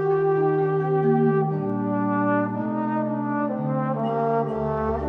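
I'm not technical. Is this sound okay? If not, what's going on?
No. There are two sharp clicks, at 1.70 and 4.00 seconds, likely dropped samples: a tiny sliver of the recording, just a couple of samples, went missing, making it jump.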